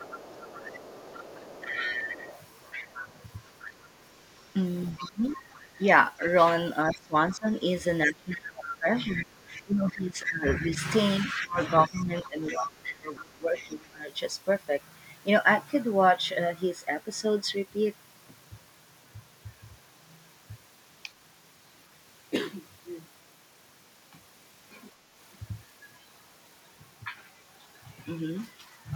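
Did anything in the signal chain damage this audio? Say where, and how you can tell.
Yes. The call processing stage's echo canceller likely failed to fully cancel the far end, so the other side's voice leaks through from the loudspeaker into the microphone. The leak runs from the start to 5.36 s at about 10 dB below the talker, again from 8.7 to 9.62 s at a similar level, and from 11.42 to 13.86 s at about 15 dB below. It is a second, fainter voice running under the main speech.

Speech is suppressed in double talk, most likely because that same echo canceller could not tell the local talker from the loudspeaker echo while both were active and turned everything down. The talker's level drops by about 10 dB over roughly 0.4 s between 1.72 and 3.13 s, and by about 20 dB over roughly half a second between 4.92 and 5.84 s. Between 6.93 and 14.0 s the speech is pulled down by as much as about 20 dB in pieces totalling around 5 s, in a span that contains two stretches of leaked far-end voice.

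A loud pop at 22.36 to 22.39 s points to the analogue wiring or the driver, most likely a voltage step or spike from a connector, switch or static discharge. It is a single sharp pop about 10 dB above the surrounding signal and lasts around 30 ms, and the speech carries on underneath it.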